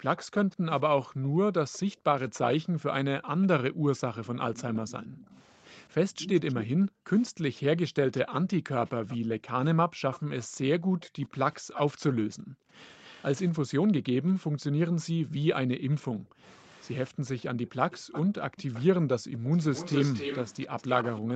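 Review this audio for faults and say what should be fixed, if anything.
Background gated by the echo canceller runs from 0.0 to 19.41 s. Whenever the far end's loudspeaker was active, the canceller clamped the microphone, so the room tone sinks by up to about 40 dB and then returns, adding up to roughly ten seconds of ducked background. Unlike a dropout or packet loss, the signal never breaks or glitches. The ambience simply pumps down and back in step with the loudspeaker activity. To prevent it, tune the suppressor for gentler attenuation, or add comfort noise so the background stays continuous.

Echo leak appears in four stretches: 0.16 to 1.79 s with a delay of 220 ms at roughly 20 dB below the speech, 3.97 to 6.62 s at 232 ms and about 15 dB down, 8.18 to 13.23 s at 247 ms and about 20 dB down, and 15.8 to 21.35 s at 270 ms and only about 10 dB down. A delayed copy of the speech trails the original. 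It is likely loudspeaker pickup that the echo canceller failed to remove. Room reverberation would blur the sound evenly, whereas this is a distinct repeat whose delay drifts upward across the clip. That drift suggests the canceller lost track of a shifting delay, and by the end the leak is at its strongest. To prevent it, have the far end use a headset, or fix its delay estimation so the canceller stays aligned.

Nothing above 8 kHz comes through, consistent with the Opus call path and the microphone processing, and that limit is not a fault.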